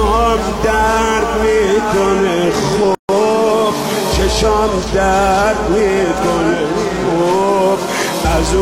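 Separately encoded pieces were joined without trimming the encoder's start-up delay and final-frame padding, leaving a gap at a join of encoded pieces: a silence of about 143 ms from 2.95 to 3.09 s, with smeared edges, before the sound resumes where it stopped.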